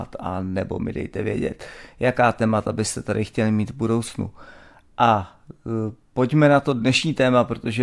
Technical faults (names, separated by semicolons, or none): none